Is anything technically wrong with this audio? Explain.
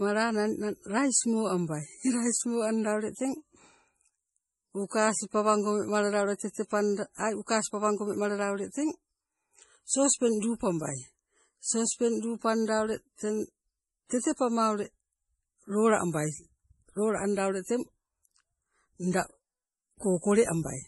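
Yes. Throughout the speech there's heavy damage, likely MP3 compression at a bitrate that sounds around 32 kbps. Nothing survives above 11.5 kHz, and the starved encoder zeroes weak frequency lines that flicker between frames, so it's watery and swirly, with chirpy s sounds and smeared attacks.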